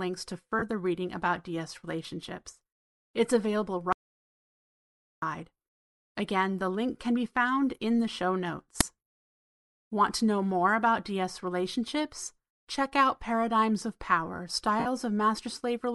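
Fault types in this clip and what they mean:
Bluetooth LC3 compression: The whole clip of speech carries a breathy, grainy edge in the upper range. That is the sound of the LE Audio transform codec, likely running with 7.5 ms frames at about 48 kbps. Missing high spectrum has been patched with noise.
lost LE Audio frames: When packets fail to arrive, the decoder repeats the last spectrum with scrambled signs. At 0.59 s a 30 ms smear sits just before "reading about". At 14.80 s a 60 ms one follows, which fits eight lost frames.
audio dropout to silence: From 3.93 s to 5.22 s the sound stops dead for about 1.3 s. The gap is silent with no room tone. Whatever was spoken then is gone. The input feed was likely cut off.
uninitialised buffer: Right after "found in the show", at 8.81 s, a loud crack lasts about 5 ms. Playback reached a block before any audio was written to it. Stale memory contents were played out as samples.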